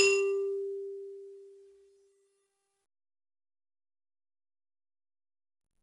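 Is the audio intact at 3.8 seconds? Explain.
No. 4-bit ADPCM compression affects the whole music clip, including 3.8 s. Each sample is a coarse 4-bit step from a prediction. This leaves gritty hiss on loud passages, and a low sample rate leaves nothing above 10.6 kHz.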